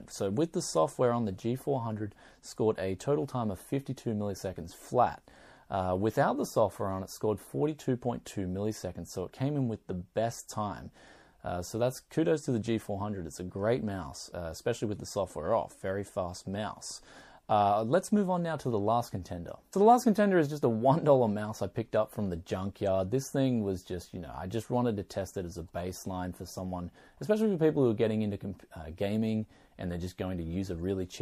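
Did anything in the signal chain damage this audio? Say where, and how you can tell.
Yes. Throughout, the sound turns watery and swirly, with smeared attacks. This is likely MP3 compression at the codec stage, consistent with a low bitrate around 64 kbps. A spectrogram shows weak bands flickering on and off from frame to frame.

A corrupt frame was decoded at 8.72 s, heard as a faint, brief glitch at about -45 dBFS. Flipped bits in what sounds like a single compressed frame misplaced energy across the spectrum, and the decoder played it anyway. A spectrogram shows a thin, isolated vertical smear, which is barely visible on the waveform.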